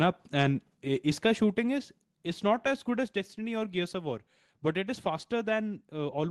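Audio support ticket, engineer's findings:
Two sudden level drops in the speech, voice and background together: about 4 dB at 2.04 s, then about 3 dB at 3.06 s. Each is a clean step with no fade. Likely cause: call software's auto gain control stepping the microphone input volume down. The microphone volume stepped down twice. Unlike codec or jitter-buffer faults, there's no gap, dropout or smearing, just a lower level afterwards. The Opus call path shows its usual top-end limit near 12 kHz.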